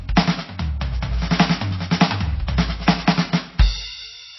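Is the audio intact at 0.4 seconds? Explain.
No. At 0.4 s the music carries the same damage heard throughout the clip, most likely MP3 compression. Nothing is present above 5.8 kHz, where the encoder has cut the treble to save bits, and the damage is plainly audible: weak frequency components drop in and out from frame to frame, giving a watery, swirling texture, and attacks smear. That degree of loss fits a very low bitrate, around 24 kbps.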